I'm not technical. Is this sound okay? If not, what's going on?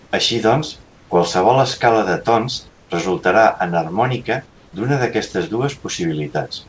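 No. There is comfort noise in place of the background at four points: 0.00 to 0.11 s, 0.83 to 1.10 s (just before "qualsevol escala de tons"), 2.69 to 2.90 s, and 4.46 to 4.73 s (just before "d'una d'aquestes"). In these short pauses, the real room sound gives way to a flat, even hiss, slightly quieter in the last three. The likely cause is that the call system stopped sending during pauses and the receiving end filled them with made-up noise.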